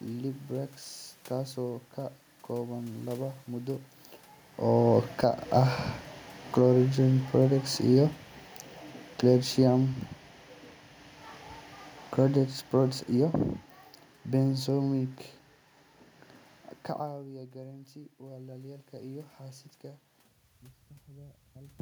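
From 4.63 to 10.05 s, automatic gain falling lowers the speech by about 8 dB after the gain control judges the input too loud or its background noise too strong. It drops about 3 dB more from 12.14 to 13.49 s. The waveform envelope and the spectrogram's room-noise floor shrink together.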